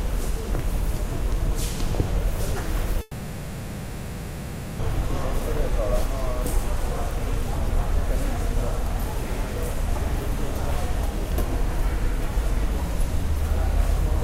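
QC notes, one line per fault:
3.01–4.81 s, long network dropout: about 1.8 s of audio is lost, likely because packets stopped arriving. The receiver stretches the last sound into a fading buzz or hiss, then the sound resumes later, with the missing span gone.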